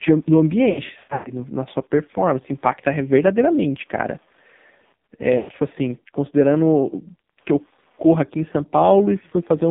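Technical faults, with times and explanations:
Throughout: Wi-Fi interference. A steady ticking sits under the speech at just under ten ticks a second, with rough rasps in between when the radio is busy. That rhythm matches a beacon every 102.4 ms being picked up and rectified by a nearby audio circuit. It's faint, around 45 dB below the speech. You're hearing a radio leaking into the analogue path.
Throughout: AMR narrowband mobile codec. The speech is squeezed into a phone band of about 150 Hz to 3.7 kHz, and nothing above that gets through. It's also heavily damaged: buzzy and synthetic. That sound suggests AMR-NB running at a low rate, around 5.9 kbps, where the vocal-tract model gets very few pulses per subframe to work with. The whole voice ends up sounding like a rough re-synthesis instead of the original.
0.70–1.34 s: lost AMR speech frames. In this stretch the speech stutters and smears. 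Syllables get drawn out, warble and dip toward silence, then come back rough. The decoder is patching over failed frames by reusing the last good pitch and spectral settings at falling gain. The gaps are scattered, adding up to roughly 380 ms across 560 ms, and the longest dropout, about 120 ms, fades out almost completely before the voice recovers.
5.38–5.57 s: lost AMR speech frames. This is a shorter hit of the same kind. About 120 ms of speech is missing across 160 ms, and most of it falls in one run of roughly 100 ms. Here the sound stretches into a buzzy, sustained tone that sinks toward silence as the concealment gain decays. Then the voice returns weak and a bit ragged for a moment while the decoder settles back onto good frames.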